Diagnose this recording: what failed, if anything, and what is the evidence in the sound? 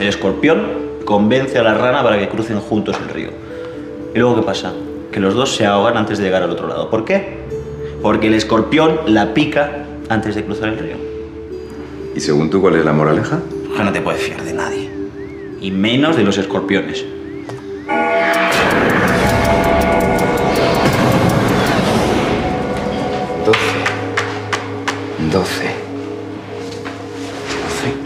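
Nothing failed here that I can hear; the sound runs steady the whole way with no dropouts, glitches or damage anywhere in the chain.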